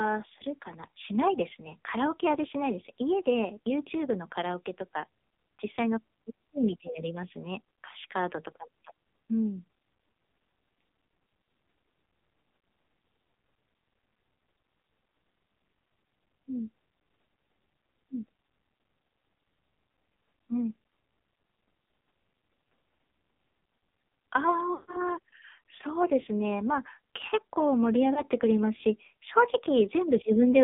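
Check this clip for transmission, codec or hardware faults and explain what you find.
The clip shows two faults: narrowband mobile coding throughout, and three dropouts from lost speech frames.

AMR narrowband mobile codec, throughout. The speech is confined to a 200 Hz to 3.6 kHz line band with nothing above it, as expected from 8 kHz sampling. The codec damage is heavy: voiced sounds come out buzzy and synthetic. This fits a low AMR-NB mode around 5.9 kbps, where each 20 ms frame has too few bits for the pulse excitation driving the vocal-tract model to track the signal closely.

Lost AMR speech frames, at 12.58–12.62 s, 24.74–24.98 s and 28.14–28.22 s. These are radio frame errors. The decoder concealed each missing frame by repeating the last good pitch and vocal-tract settings at falling gain. The 12.58 s event covers about 40 ms, consistent with two frames, and is heard as a short dip with a warble. 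The 28.14 s event fits a single 20 ms frame and gives a brief wobble. The 24.74 s event is the longest, about 140 ms, consistent with seven frames. There the sound stretches into a held tone that fades to silence before speech returns weak or rough for a moment.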